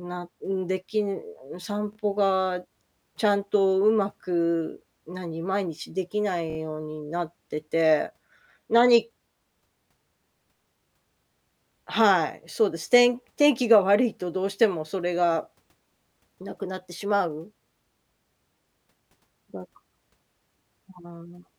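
Speech with two repeated-buffer stutters. At 1.93 to 1.97 s, a 23 ms piece plays twice more. At 6.50 to 6.57 s, it plays three more times. Late audio made the device replay its last buffer, which fits a 1024-sample buffer.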